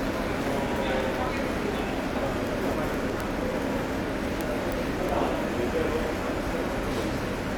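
Everyday sound, with word clock ticks from 0.11 to 7.55 s: a steady run of roughly twenty sharp ticks per second. They come from an unlocked digital link that slips a single sample each time. Unlike buffer dropouts, nothing goes silent.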